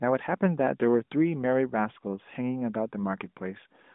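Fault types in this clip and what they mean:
No faults can be heard in this speech recording.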